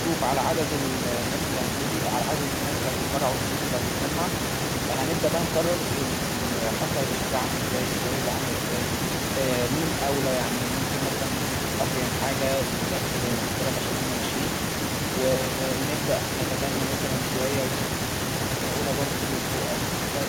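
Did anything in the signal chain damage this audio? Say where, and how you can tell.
No, nothing in the signal chain has audibly damaged this speech, and no stage from capture through playback leaves a fault that can be heard.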